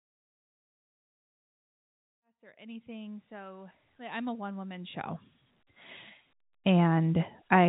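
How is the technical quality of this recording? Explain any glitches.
The recording shows no technical glitches that a listener would notice.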